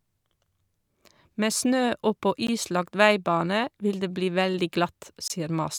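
Speech with two gaps at joins of encoded pieces: a 15 ms gap at 2.47 s and a 23 ms gap from 5.28 to 5.30 s. Separately encoded segments were joined untrimmed, so encoder start delay and final-frame padding cut holes in continuous sound.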